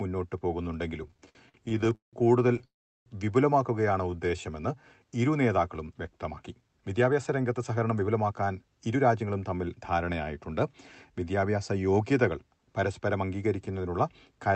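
From 1.03 to 2.65 s the sound drags and catches through 24 brief stalls, the longest 177 ms, filling about a third of that span. These repeated stalls (stutter) come from late packets draining the jitter buffer, with the last sound stretched to cover each wait.

From 2.65 to 3.08 s a call audio freeze leaves a brief fade and then about 0.38 s of silence before the audio resumes. The likely cause is packets held up in transit, leaving the buffer empty for 412 ms.

Between 4.11 and 4.42 s the audio slows to 85 % speed at unchanged pitch, drawn out by 56 ms. This jitter buffer slow-down repeats pitch periods to rebuild a reserve.

From 6.29 to 9.31 s the audio runs hurried at 109 % speed, losing roughly 0.3 s, and again from 13.73 to 14.50 s at 107 %, shedding a few tens of milliseconds. In each jitter buffer speed-up, excess buffered audio is trimmed by removing short pitch-period pieces. 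Throughout, the Opus call path keeps the top end cut at 8 kHz.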